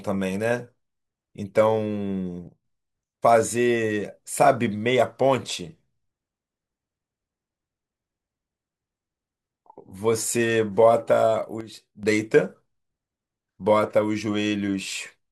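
At 2.48 s the level drops by about 9 dB for 0.17 s, then returns. At 11.61 s it drops by about 8 dB for 0.43 s. Speech and background noise fall together. Each is a sudden gain jump, likely from digital gain switched without a ramp.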